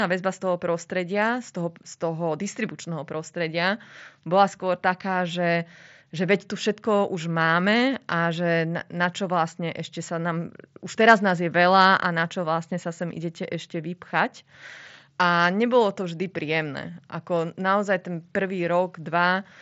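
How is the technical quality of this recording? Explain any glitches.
No glitches to report in this speech recording, which arrives over a Bluetooth mSBC headset link and so has nothing above about 7.7 kHz, as that wideband codec intends.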